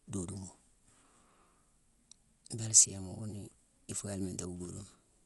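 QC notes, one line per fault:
Throughout, Dolby Digital compression: likely a low-bitrate AC-3 encode, consistent with around 64 kbps, where the encoder narrowed the band and left many frequency lines without mantissa bits. The speech sounds dull with nothing above 11.5 kHz, and rough, fluttering dither noise surrounds tonal parts.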